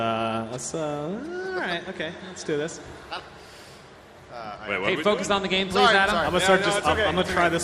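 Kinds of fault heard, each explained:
DAB burbling: Bit errors from weak digital radio reception slip past error correction into the MP2 stream, so corrupted samples put short noise blips into single sub-bands and corrupted scale factors make sub-bands jump in level for up to a frame. Here it comes in three bursts, from 3.16 to 3.53 s, 5.18 to 5.75 s and 7.10 to 7.41 s. The last burst is denser, which fits a higher error rate, roughly twice that of the earlier two.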